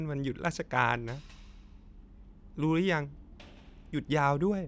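Nothing goes wrong anywhere in this bit of speech, so there's no fault to point to at any moment.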